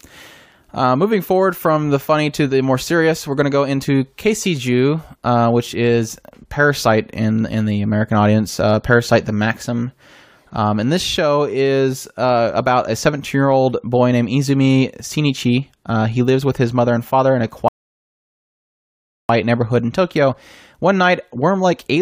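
At 17.68 s, just after "and father in a", the speech drops into a rebuffering stall: playback exhausted its downloaded audio and halted until more data arrived. The result is dead silence lasting about 1.6 s, ending at 19.29 s, after which the talker picks up with "neighborhood in" at exactly the point where the sound stopped. No speech is skipped or repeated; the stall simply inserts 1.6 s of extra time into the clip.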